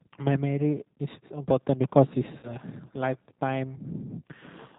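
Speech runs through the G.729 codec for the whole clip, and the damage is plainly audible. Everything above 4 kHz is gone. The voice is rebuilt from a vocal tract filter, a pitch predictor and a few pulses per 5 ms subframe. That gives it a rough, slightly synthetic edge, which fits the G.729A variant at 8 kbit/s. Consonants lose their air.

From 2.06 s to the end, a video or display buzz joins the sound. A screen or video cable is coupling into the audio path. The core of it is a buzz at 59.94 Hz, the field rate of the picture, with a hashy layer of harmonics above it. A thin, very high tone near 15.7 kHz also rides on top, matching the line rate. It sits far below the speech but stays steady and never stops.

Between 2.39 s and 2.55 s, VoIP packet loss concealed by the speech codec breaks the flow. About 40 ms of audio never arrived, which fits two lost packets. The decoder fills the gap by repeating its last pitch and filter at falling gain. 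That gap turns into a brief buzzy tone or coloured noise that fades. Each frame builds on the one before it. So the voice stays weak and distorted after packets resume, until about 2.55 s.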